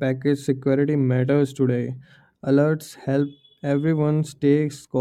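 Nothing in the recording stood out as a technical problem on listening.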